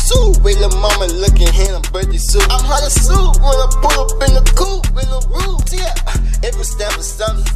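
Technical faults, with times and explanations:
1.66–2.29 s and 4.64 s to the end, one channel drops out: the sound falls abruptly by about 6 dB for the length of each dropout. Likely one stereo channel went missing, so after the mono sum only half the shared signal remains.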